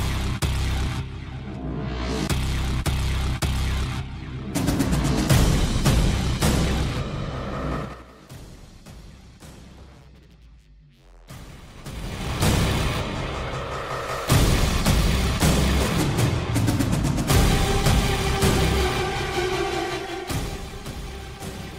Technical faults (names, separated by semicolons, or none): zipper noise